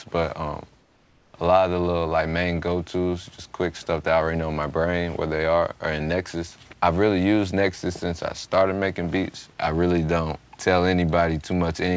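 From 0.80 to 1.34 s, comfort noise replaces the background: a steady, featureless hiss about 3 dB quieter, likely synthesized by the receiver while the sender paused transmission. A spectrogram shows the detailed texture smoothing into an even band below 8 kHz; the waveform flattens uniformly.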